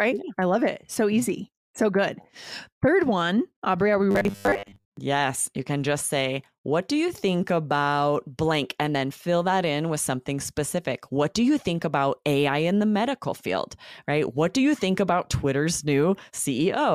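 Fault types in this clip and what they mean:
Robotic sound from repeated short buffers: audio likely arrived too seldom, so 10 ms chunks were looped, giving the speech a rigid 100 Hz metallic buzz from 4.11 to 4.99 s.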